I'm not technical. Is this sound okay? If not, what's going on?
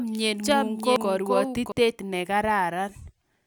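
No. From the start until 1.72 s there is a doubled audio track: a second, somewhat quieter copy of the same speech runs about 0.7 seconds behind the first. It is most likely caused by a second, slower recording path or a misaligned edit, and it stops abruptly at 1.72 s.

At 0.96 s there is a CD skip: a brief tick and a split-second of silence, after which the sound carries on from a different point, as if the laser jumped along the disc.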